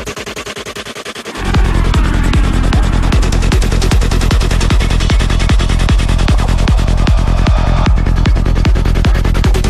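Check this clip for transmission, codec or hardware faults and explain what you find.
One fault runs through almost the entire clip: clock slip clicks from 0.17 s to 9.6 s. Faint ticks recur about every tenth of a second, around a hundred in all. Each is a single sample dropped or repeated, likely because two devices run on unsynchronised clocks. The steady spacing points to a mismatch of roughly 200 ppm. A waveform shows a one-sample step at each slip. A spectrogram shows thin, evenly spaced vertical lines, clearest where the sound is loud.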